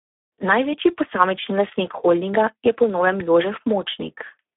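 From start to finish the speech sounds hoarse, grainy and at moments robotic, confined to a thin phone-like band of roughly 300 Hz to 3.5 kHz with nothing above 3.8 kHz. This is heavy Speex codec damage, where too few bits for the CELP excitation leave a buzzy, noisy texture that fits a rate near 8 kbps.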